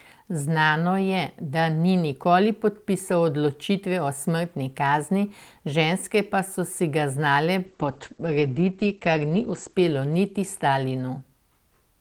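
At 7.66 s a call bitrate drop sets in and lasts until about 11.31 s. The bandwidth estimate fell, so the encoder coded the speech far more coarsely, which fits a fall from around 32 kbps to roughly 10 kbps. The sound turns rough and muffled, worst for about 1.6 s. On a spectrogram, energy above 8 kHz vanishes, where it had reached about 20 kHz before, and the remaining bands look smeared and blocky.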